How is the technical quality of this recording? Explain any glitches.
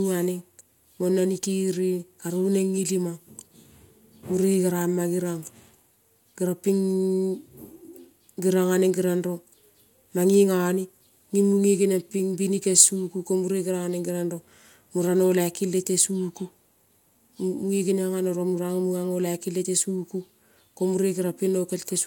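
No technical glitches can be heard anywhere in the recording. There is nothing in the audio that calls for an explanation.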